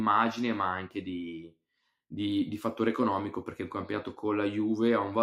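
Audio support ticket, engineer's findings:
Noise suppressor applied to music or sounds, whole clip: level pumps by a few dB as a speech-tuned suppressor treats sustained content and tails as noise. Spectrogram shows decays fading early and uneven energy between onsets. Waveform envelope breathes.

Sound cut by the noise suppressor, 1.38–1.56 s: suppressor misclassifies this passage as noise, gain dips about 12 dB at deepest. Waveform shows a visible notch in amplitude; spectrogram shows a darkened vertical band across the band.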